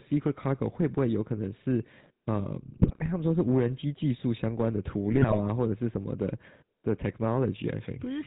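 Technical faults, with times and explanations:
Throughout, GSM full-rate codec: the speech has a buzzy, gravelly roughness and nothing above 4 kHz, which fits a 13 kbps GSM full-rate coder. Its regular pulse excitation keeps every third sample, so the damage is steady, unlike narrowband muffling, which stays smooth.
2.82 to 3.09 s and 5.12 to 5.37 s, GSM bit errors: the speech breaks into squawks, pops and gargling. Corrupted filter, pitch or gain values reach the decoder, bending the spectrum or spiking the level. Short, localised bursts like these separate it from the constant codec roughness.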